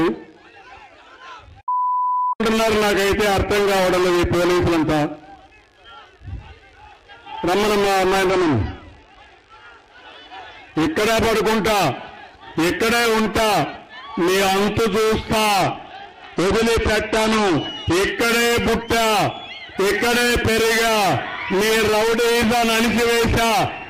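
Bluetooth audio with two SBC bit pool drops, 8.30–9.85 s and 15.62–18.07 s: treble dulls and gritty noise rises, consistent with the bit pool falling from 28 to 12 (about 96 kbps). A spectrogram shows the upper band emptying, with grainy speckle below.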